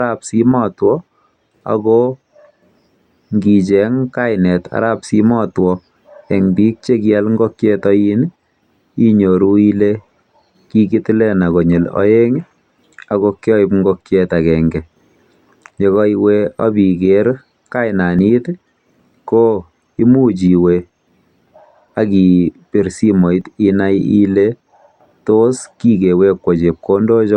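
A speech recording with two brief skips, at 18.19 s and 23.41 s. At each point the sound jumps forward slightly. There is no gap of silence. The audio on either side is simply butted together. The first skip loses roughly 20 ms, the second roughly 10 ms. The likely cause is a dropped buffer (overrun). The recording software fell behind, and the hardware overwrote samples before they were collected.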